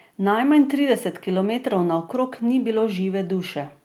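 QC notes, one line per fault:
No technical faults were heard anywhere in this speech recording.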